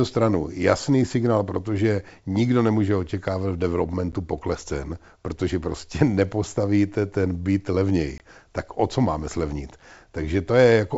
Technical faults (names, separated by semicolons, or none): packet loss on an ADPCM call